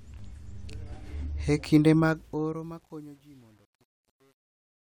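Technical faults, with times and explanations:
1.94–4.84 s, truncation distortion on a fade: the fade-out on this speech, starting around 2 s, gets grainy as the level drops. From about 2.53 s to the end the tail turns gritty. The gain stage is throwing away low bits without dither, which fits something like 9-bit resolution, so the quiet end of the waveform collapses into a few coarse square steps instead of tapering off cleanly.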